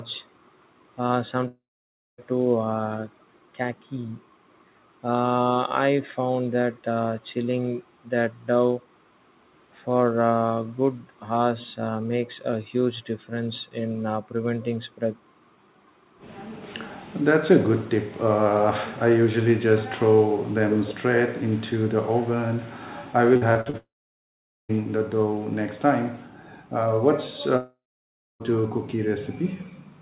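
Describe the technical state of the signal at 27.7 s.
At 27.7 s the speech sits inside a gap from 27.57 to 28.42 s, likely a long network dropout. The last sound is stretched into a fading buzz or hiss, then about 0.6 s of silence, and speech resumes with about 0.84 s lost. That length and dead silence set it apart from brief, smoothed packet-loss glitches.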